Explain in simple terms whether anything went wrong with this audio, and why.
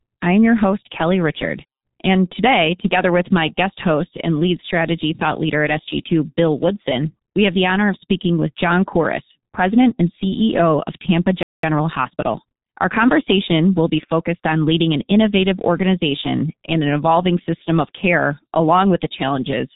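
Several things went wrong. The whole recording passed through the G.723.1 codec, an old internet-phone format. It squeezes speech very hard and drops everything above about 4 kHz. That makes the voice sound muffled and rough, and consonants get smeared.

At 11.43 s there is a playback stall. The sound simply stops for about 0.2 s, until 11.63 s. The player likely ran short of data, or was held up, and had nothing to play.

Right after, from 11.63 to 12.99 s, comes a time-compressed catch-up. To recover the lost time, the player trims tiny slices and blends the gaps. The speech runs about 1.15 times faster, at normal pitch.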